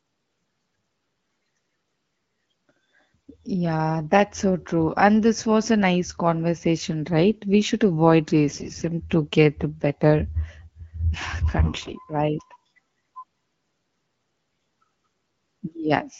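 AMR bit errors appear from 8.48 to 8.84 s and again from 11.62 to 11.93 s, on speech carried by AMR-WB whose light coding character points to a rate around 12.65 kbit/s. A significant share of the weakly protected frame bits arrived flipped, somewhat heavier in the first burst, so excitation pulses land wrongly and fine pitch, gain and spectral values drift. Pitch and loudness roughly hold, but the voice turns hoarse, scratchy and gargly.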